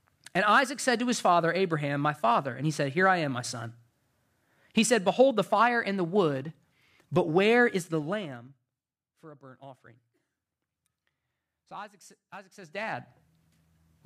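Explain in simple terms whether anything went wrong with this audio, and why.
Zipper noise appears twice in this speech, from 7.75 to 9.0 seconds as the level drops, and from 12.55 to 13.12 seconds as it rises again. Rather than gliding, the volume moves in small jumps, roughly ten a second the first time and about twenty a second the second time. Each jump leaves a tiny click, so you hear a ticking, zipping texture riding on the voice until the level settles.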